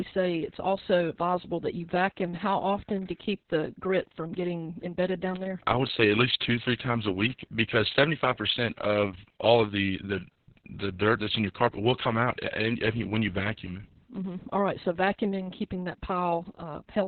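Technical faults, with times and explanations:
Throughout, Opus voice compression: the speech is squeezed into narrowband with nothing above 4.4 kHz, so it's muffled, hoarse and a bit robotic. The coarse, heavily damaged excitation from the SILK coder fits a bitrate around 6 kbps with long frames.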